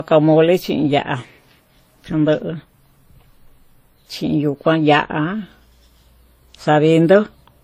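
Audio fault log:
throughout transcoding between lossy codecs: likely a WMA encode re-encoded as Vorbis near 38 kbit/s, stacking both codecs' artefacts together, with nothing above 16 kHz.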